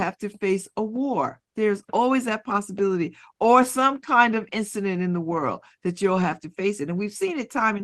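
Speech over a WebRTC call path, band-limited near 12 kHz as an Opus link at roughly 24 kbps would leave it, with no technical fault to report.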